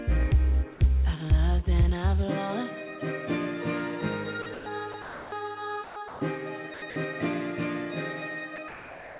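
Between 4.42 and 6.96 s, the sound turns choppy. It is chopped by the voice detector, likely from the sender switching transmission on and off. Stretches at 4.42–4.66, 4.92–5.32, 5.84–6.20 and 6.74–6.96 s give way to synthetic hiss.

At 8.56 s, a brief bit of sound is dropped by the voice detector. The sender likely judged it to be background and stopped sending. About 20 ms of sound vanishes, and steady noise stands in for it.

From 8.56 s to the end, comfort noise replaces the background. Transmission likely paused once no sound was detected, and the receiver generated its own fill. The real background's texture gives way to a flat, featureless hiss. Like the rest of the clip, it has nothing above 4 kHz, which fits a narrowband call codec.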